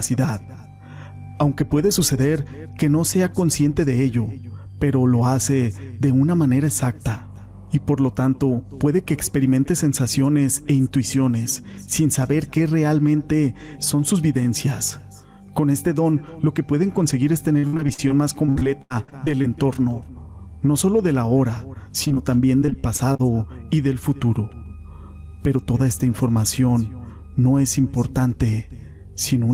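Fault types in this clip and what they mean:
Repeated packet loss (robotic sound): a chain of holes, each patched by extending the previous sound, turns 17.59–19.46 s and 22.60–23.21 s choppy. About a quarter of each stretch is filler, with gaps up to 81 ms, unlike an isolated dropout.
Short concealed packet loss: three brief holes of about 20 ms each, starting at 22.04, 22.08 and 22.14 s, are bridged by continuing the last sound and blending back. They leave only a quick smear or wobble rather than a sustained robotic texture.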